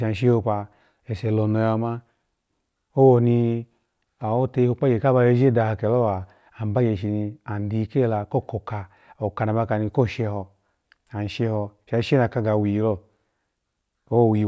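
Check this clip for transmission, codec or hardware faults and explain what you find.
Nothing in this speech recording points to a transmission, codec or hardware fault. Listening through it, there is no event or passage that calls for an explanation.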